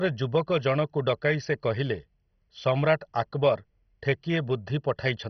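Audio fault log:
throughout, MP2 compression: The speech was most likely passed through an MPEG Layer II encoder starved of bits, with heavy damage that fits a rate of around 32 kbps. With so little to share across its 32 sub-bands, the encoder shuts off every band above about 6.1 kHz and quantises the rest coarsely, so the speech sounds dull and muffled, with a gurgling, granular grit as bands drop in and out.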